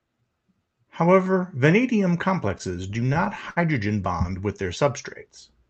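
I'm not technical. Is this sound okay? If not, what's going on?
No. From 2.49 to 3.58 s, before "bond with", late-arriving data caused repeated stalls (stutter): nine brief hiccups that make the speech drag, though nothing is lost.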